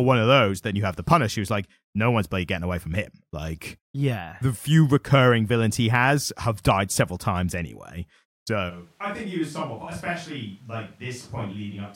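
At 8.71 s the close microphone likely drops out, leaving a switch to a distant microphone through to the end. The speech suddenly turns roomy and hollow, loses bass and falls roughly 10 dB, with room noise about 30 dB below it.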